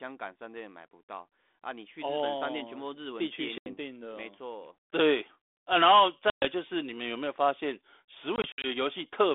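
Packet loss on an ADPCM call cuts hard silent holes at 3.58 s (80 ms), 6.30 s (120 ms) and 8.36 to 8.67 s (120 ms in short runs up to 60 ms). Afterwards the decoder's predictor and step size disagree with the sender's, so the speech returns with brief distortion that settles within tens of milliseconds. Throughout, the 250 Hz to 3.6 kHz G.726 line, which fits 32 kbit/s, adds light coding grain.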